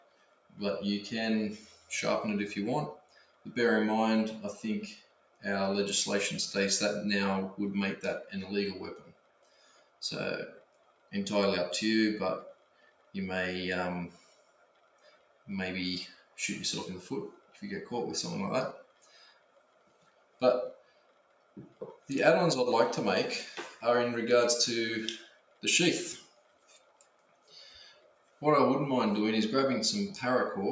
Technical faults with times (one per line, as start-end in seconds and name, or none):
0.00-30.71 noise suppressor applied to music or sounds
0.00-5.45 sound cut by the noise suppressor
7.96-22.09 sound cut by the noise suppressor
22.53-22.68 one channel drops out
23.70-28.42 sound cut by the noise suppressor